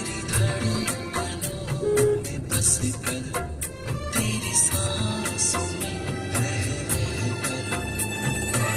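A call bitrate drop from 0.68 to 5.61 s makes the audio coarse and muffled, bottoming out for about 3.1 s, consistent with roughly 48 falling to 13 kbps. It degrades continuously, with no packet-loss gaps.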